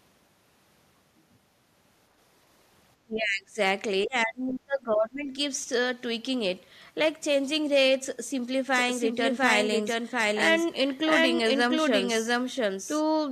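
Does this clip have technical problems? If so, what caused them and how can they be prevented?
Yes. Speech suppressed in double talk at 3.04–3.58 s and 4.05–5.36 s: the voice dips by around 25 dB, likely because the echo canceller mistook simultaneous talking for echo. Tuning its double-talk detection or using headsets would prevent this.

Doubled audio track from 8.75 s to the end: a second, equally loud, full-band copy trails by roughly 0.7 s, likely from the sound being captured twice through a slower path. Routing the sound through only one capture path would prevent this.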